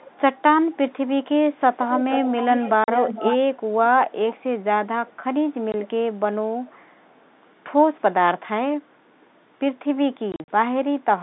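From 0.0 to 0.93 s a faint repeat trails the speech by 331 ms: echo leak, likely a loudspeaker pickup the far end's echo canceller missed. It is a distinct delayed copy, not a smeared reverberant tail. From 1.54 to 3.56 s it returns at 436 ms, nearly as loud as the speech. At 2.84 s, packet loss filled with silence cuts a 40 ms hole with hard edges, which fits two 20 ms packets. It is bare silence rather than a smoothed-over gap. Faint echo recurs at 436 ms from 5.06 to 5.89 s, with a single 20 ms dropout at 5.72 s. Still fainter echo follows from 6.65 to 7.36 s. From 10.32 to 10.48 s, scattered silent gaps total 100 ms, the longest lasting 40 ms.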